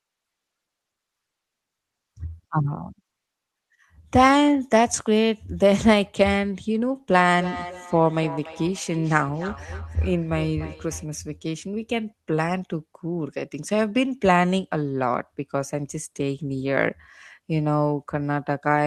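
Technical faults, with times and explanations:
7.13–11.09 s, feedback echo between two devices: the speech comes back around at a steady interval of roughly a third of a second, peaking at about 14 dB below the direct speech. That's what you get when two devices in the same room share a call. One plays out what the other's mic sent, that mic hears it again, and each echo canceller only strips what its own speaker produced, so the loop slips through.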